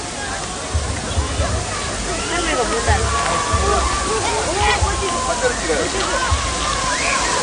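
An everyday sound recording with a hard treble ceiling at 9.8 kHz for its whole length, plus a watery, swirly texture and smeared attacks, likely from MP3 compression at a low bitrate, such as 48 kbps. On a spectrogram, energy stops flat at 9.8 kHz, with speckled patches blinking on and off below it.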